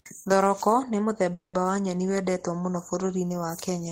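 A call audio freeze runs from 1.33 to 1.61 s. The speech stops moving forward and the last sound is stretched into a fading buzz that sinks to silence for about 140 ms before the talker resumes exactly where they left off. The likely cause is packets held up in transit, draining the jitter buffer, so the receiver filled about 200 ms with synthetic sound. Nothing is lost; instead the rest of the audio arrives about 200 ms later.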